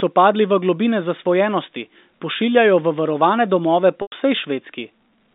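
At 4.02 s the speech catches on packet loss with pitch repetition, lasting until 4.12 s. About 100 ms of audio goes missing, which fits five 20 ms packets. The receiver fills the hole by repeating the last pitch period. You hear a brief held, buzzy tone that fades over roughly 50 ms into silence. Speech then resumes through a short cross-fade. The narrow telephone band of the G.711 line stays audible throughout.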